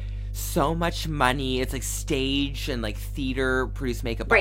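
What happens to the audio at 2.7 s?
At 2.7 s the speech sits on top of mains hum, which runs through the whole clip. It is a steady low tone at 50 Hz, nearly as loud as the speech. Power-line current leaks into the signal, likely through a ground loop or a nearby transformer.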